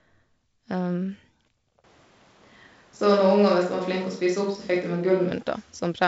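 From 1.84 s to 5.31 s the speech turns suddenly roomy and hollow, with thinner bass, and snaps back just as abruptly. This is most likely a switch to a distant microphone, with the close microphone dropping out. Loudness barely changes, but a room noise floor appears, roughly 35 dB below the speech. On a spectrogram, reverberant smearing fills the gaps between syllables and the low end weakens. The waveform shows softer attacks and a raised floor in the pauses, all within the wideband telephone band that stops near 7.7 kHz.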